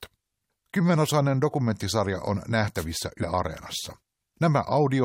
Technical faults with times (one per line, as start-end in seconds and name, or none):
2.76-2.85 wireless microphone noise hit
3.22 damaged data in a compressed stream